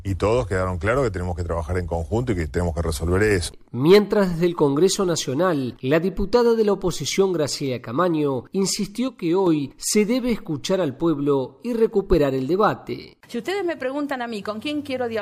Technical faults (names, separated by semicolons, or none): sudden gain jump